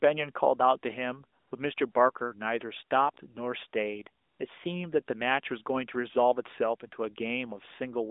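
AMR comfort noise at 1.40–1.52 s, 1.92–1.94 s and 4.24–4.40 s: speech frames stopped, so smooth synthetic noise briefly replaces the real background over this narrowband line.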